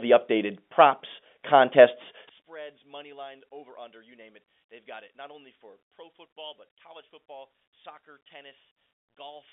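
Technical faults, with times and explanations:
2.29 to 9.52 s, one channel inverted: after "updated props contests" the speech drops by about 26 dB. Likely one reversed channel cancels the shared sound when summed to mono.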